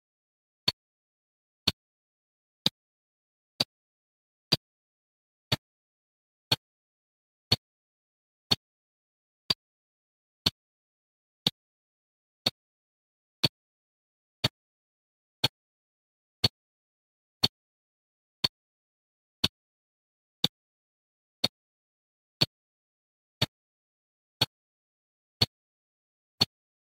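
From 2.37 to 4.63 s and again from 9.20 to 10.11 s, the sound plays about 6% fast and a semitone sharp before snapping back. This is a drift correction step, likely a clock-matching resampler jumping its rate. A spectrogram shows harmonics shifting up together.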